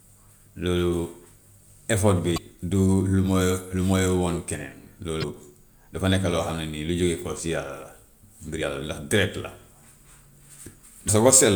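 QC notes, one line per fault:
2.34 to 2.38 s, 5.20 to 5.24 s, 8.58 to 8.62 s and 11.05 to 11.09 s: damaged data in a compressed stream. Each is a brief glitch of about 40 ms cutting through the speech. Corrupted bytes there made the decoder misread the frames and lose sync until it found the next valid frame header.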